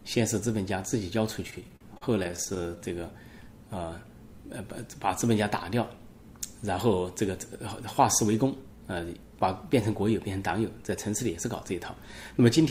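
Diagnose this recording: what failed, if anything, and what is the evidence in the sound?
What failed is the network delivery feeding the jitter buffer, and you get repeated stalls (stutter) between 1.47 and 2.80 s. Across that stretch the sound hiccups about two dozen times, each hold lasting up to 45 ms and adding up to roughly 0.31 s, about a quarter of the span. Packets were arriving late or slower than playout, so the buffer kept draining and the receiver stretched the last sound to cover each wait. Nothing's actually lost; it just drags and stammers.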